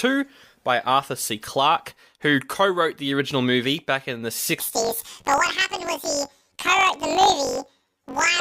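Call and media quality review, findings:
Speech jumps an octave high with a fast flutter from 4.6 s, after "movie back in the", to end. Planar audio read as interleaved: left then right halves replayed at double speed, about 47 Hz flutter, fits 1024-sample blocks. Probable component: decoder-to-mixer format handoff.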